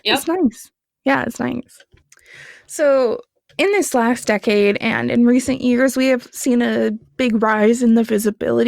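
No technical faults can be heard anywhere in the recording. Nothing in the audio points to a problem at any stage of capture, processing or playback.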